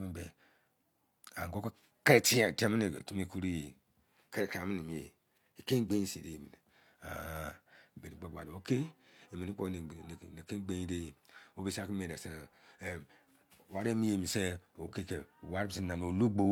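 No technical faults are audible.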